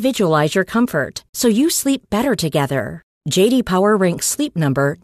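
Speech recording, no technical faults to report.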